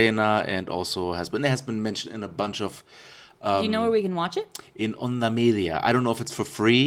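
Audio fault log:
2.41–2.47 s, lost packet rebuilt from error correction: just after "been mentioned in a", about 40 ms sounds rougher and noisier but without any gap. That fits two 20 ms packets that went missing and were replaced by the low-bitrate backup copies carried in the packets that followed.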